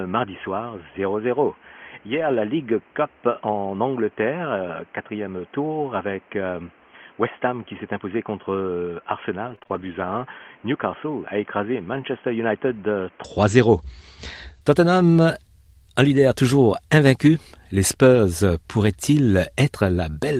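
Speech clip whose first 13.2 s sound dull and boxy, with nothing above 3.3 kHz, a noise floor roughly 30 dB below the speech and a level about 10 dB lower. This is likely an input switched to a poorer device, such as a headset call profile. The sound clears abruptly at 13.2 s with no silence at the switch. There are lost packets rebuilt from error correction at 0.45, 5.93, 16.15 and 18.15 s, each a single 20 ms frame, plus a 140 ms run of seven frames from 2.13 to 2.39 s. The decoder played low-bitrate copies carried in the following packets, so there is no gap, but those moments turn briefly rougher and noisier. Between 9.43 and 11.95 s, scattered short gaps appear: about four separate packet losses, the longest around 30 ms. Each was patched by extending the preceding sound, leaving brief ticks and smears. All of this passes through an Opus call path at 32 kbps, which fits an 8 kHz audio bandwidth.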